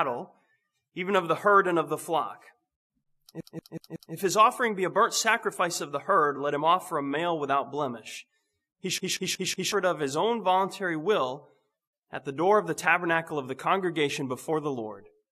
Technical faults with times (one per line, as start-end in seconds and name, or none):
3.41-4.14 CD stuck on one turn
8.98-9.72 CD stuck on one turn